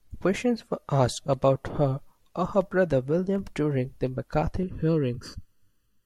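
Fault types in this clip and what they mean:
Dropped samples at 2.55 s, 3.36 s and 5.15 s: each is one sharp click, likely caused by a tiny fraction of a millisecond missing from the stream, so the waveform jumps to a later value. The first falls right after "her of", the second just before "during the".
Channel delay (comb filtering) from 4.63 s to the end, starting just after "during the": one channel runs under a millisecond behind the other. Summed to mono, they cancel at evenly spaced frequencies from around 700 Hz upward, making the sound hollow and phasey.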